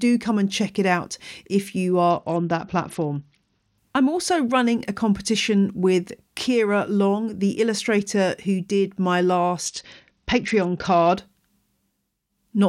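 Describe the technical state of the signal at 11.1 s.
At 11.1 s the speech is inside a Bluetooth SBC bit pool drop, running from 9.65 to 11.17 s, just after "illustrator who did my". The treble turns dull and gritty. Upper sub-bands are starved of bits, which points to a bit pool falling from 28 to 8, near 72 kbps.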